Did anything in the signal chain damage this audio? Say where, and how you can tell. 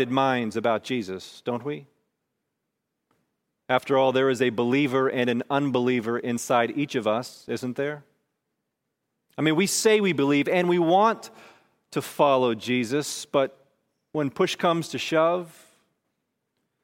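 No, nothing along the chain from capture to playback left an audible mark on this speech.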